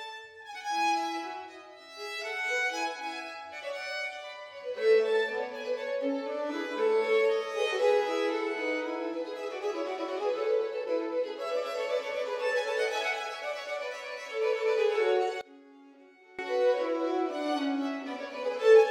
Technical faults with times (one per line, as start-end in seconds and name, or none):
15.41-16.39 one channel inverted